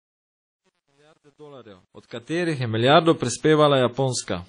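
Across the whole clip the speech carries plainly audible ringing, washy smearing and a hiss that breathes with the signal, and nothing is heard above 10.1 kHz. The likely cause is WMA compression at a low rate, which fits around 32 kbps, where long transform blocks spread quantisation noise and weak components are dropped.

From 0.0 to 2.69 s the fade sounds gritty, worst from 0.0 to 1.99 s. This is truncation distortion on a fade: the gain stage kept too few bits without dither, which points to about 10 bits, so quiet stretches collapse into coarse square steps.

At 2.06 s a short hiss of about 52 ms runs up to an attack at 2.11 s, which sounds soft and smeared. This is pre-echo: the codec spreads noise sized for the loud attack across its whole block, filling the quiet moment just before it.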